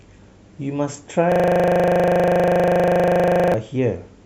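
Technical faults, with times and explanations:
1.32–3.54 s: system hang loop. The system froze while the sound hardware kept replaying one 40 ms slice of speech over fifty times, a 25 Hz buzz; the waveform shows identical repeating blocks, the spectrogram evenly spaced vertical stripes.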